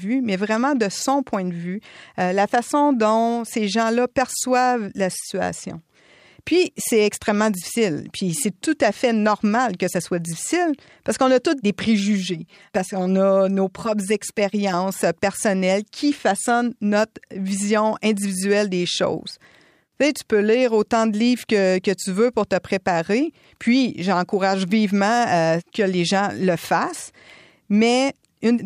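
From 12.00 to 14.74 s the speech turns hollow and phasey, a channel delay (comb filtering) fault. One channel lags by about 5 ms, so the mono sum cancels at evenly spaced frequencies from roughly 100 Hz upward. Unlike flanging, these notches never sweep.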